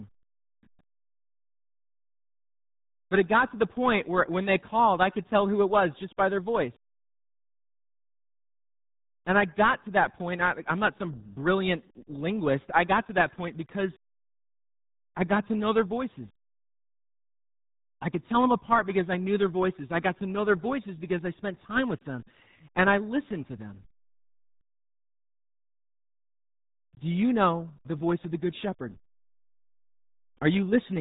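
It's speech run through the RealAudio 14.4 codec from start to finish: nothing above 3.8 kHz survives, and the heavy, gargly smearing points to roughly an 8 kbit/s dial-up stream.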